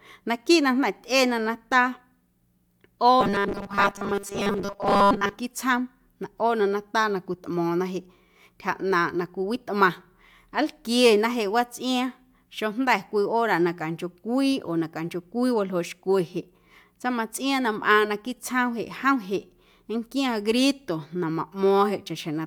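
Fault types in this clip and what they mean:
Robotic sound from repeated short buffers: from 3.21 to 5.36 s the speech turns into a stiff metallic buzz pinned at 200 Hz, loosely tracking the words. Likely cause: a 5 ms chunk replayed over and over, skipping most of the real audio.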